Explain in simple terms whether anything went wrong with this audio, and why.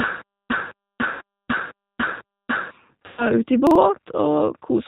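Yes, three kinds of problem can be heard in this speech clip.

The whole recording has been through the G.729 codec, a low-rate phone-call codec that rebuilds speech from a model of the vocal tract, pitch and a few pulses rather than storing the actual sound. Everything above about 4 kHz is gone, so the speech sounds narrow and muffled, and the rebuilding leaves a plainly audible rough, slightly synthetic quality throughout.

Twice, VoIP packet loss concealed by the speech codec is heard. Around 1.13 to 1.22 s, roughly 80 ms of audio went missing, which fits four lost packets. The decoder filled the gap by repeating and fading its last sound, giving a short stretched, fading smear. Around 3.06 to 3.28 s, about 120 ms was lost, which fits six packets, and the same stretched, fading sound is longer here. Because the codec builds each frame on the previous one, the speech stays weak briefly after each gap.

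From 3.67 to 3.76 s, chunks out of order occur. A piece of audio about 43 ms long arrived one chunk late and played after the piece that should have followed it. Nothing is missing, but the sound there is briefly jumbled, with hard joins between the swapped pieces.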